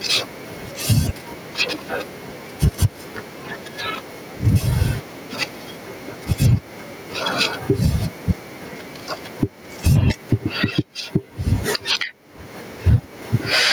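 Throughout this speech recording, the levels are flattened and squashed with a swing of around 15 dB. This is gain pumping, likely from an overdriven microphone input being clamped by a fast limiter.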